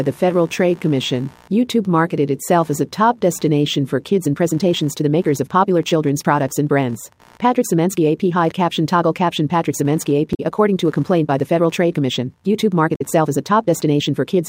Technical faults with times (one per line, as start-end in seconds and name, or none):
0.00-14.48 computer activity noise
4.07-14.48 time-stretched section
10.31-10.40 damaged data in a compressed stream
12.92-13.01 damaged data in a compressed stream